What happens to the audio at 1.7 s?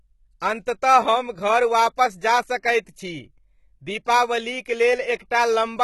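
At 1.7 s you're hearing the same damage that runs through the whole clip, likely HE-AAC compression at a low rate, something like 16 kbps. The treble is rebuilt by copying lower bands upward, so s sounds turn gritty and metallic, with nothing above 11.8 kHz.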